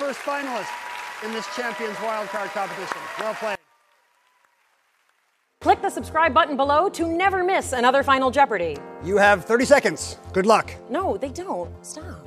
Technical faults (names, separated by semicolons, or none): one channel inverted